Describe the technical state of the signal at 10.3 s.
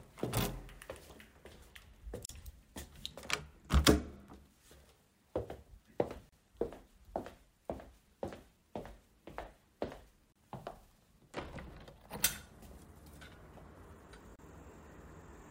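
At 10.32 s the sound drops out for about 32 ms, resuming at 10.36 s. It's a gap at a join of encoded pieces, which recurs every 4 s. The audio was encoded in separate chunks and stitched together without trimming, so the encoder's start-up silence and the padding on each chunk's last frame both stay in. You hear a short hole with edges smeared by the codec, and the sound picks up exactly where it stopped.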